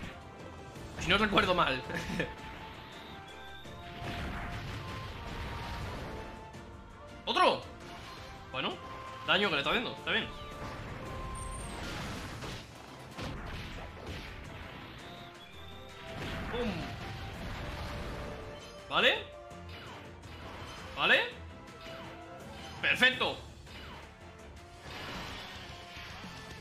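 From 11.83 to 13.34 s, a section at the wrong speed plays about 1.51 times too fast. Pitch jumps up by roughly seven semitones at once, and the sound turns high and hurried. A clock mismatch in playback or editing is the likely cause.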